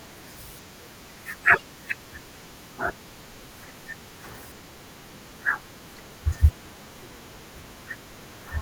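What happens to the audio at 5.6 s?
At 5.62 s the speech is broken by a very brief glitch, heard as a chirp, squawk, click or short hole, lasting only a few milliseconds. It comes from damaged data in the compressed stream. Some bytes at that point were lost, zeroed or overwritten. The decoder could not read the affected frame correctly, lost its place in the bitstream, and had to resynchronise on the next valid frame header, producing that short glitch.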